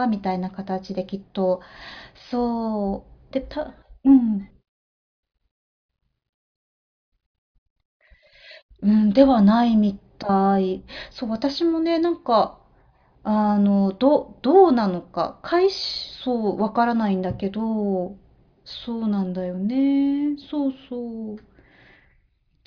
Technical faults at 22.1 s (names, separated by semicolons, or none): none